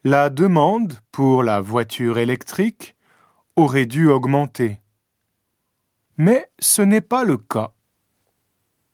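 Speech recording with no audible technical faults.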